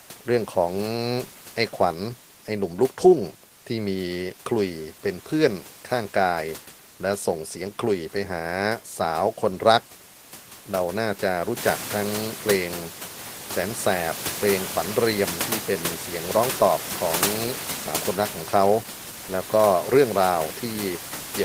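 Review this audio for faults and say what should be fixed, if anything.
Nothing here needs fixing: the speech comes through without any system fault, and the only change is the room's own background noise stepping up by about 13 dB somewhere around the halfway mark, which is part of the recording itself and still sits roughly 13 dB under the speech.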